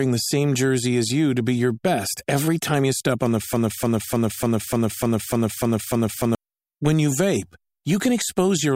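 From 3.53 s to 6.35 s, a fragment of speech about 0.3 s long repeats exactly, back to back, nine times: a broken-record loop. The player or stream likely stalled and kept replaying its last buffered piece, so the speech meant for that span is lost.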